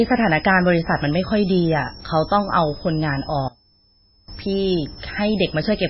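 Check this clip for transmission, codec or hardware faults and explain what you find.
Three faults can be heard in this speech clip.

A high whistle runs throughout, around 5 kHz and wandering between 4.6 and 5.5 kHz, roughly 20 dB below the speech. This is switching supply whistle from a power supply running in an audible burst mode or beating with another one.

The whole clip sounds watery and smeared, with nothing above 5.6 kHz. This is likely heavy MP3 compression at a very low bitrate, consistent with about 16 kbps, zeroing weak frequency lines and cutting the treble.

From 3.48 to 4.28 s the speech drops by about 22 dB. This is likely one channel inverted, with the shared centre cancelling when the channels are summed to mono.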